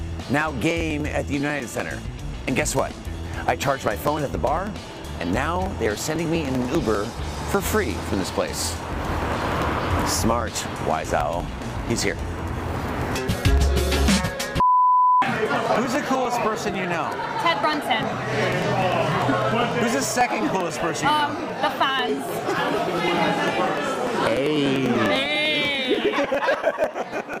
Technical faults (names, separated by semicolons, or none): periodic USB or driver dropouts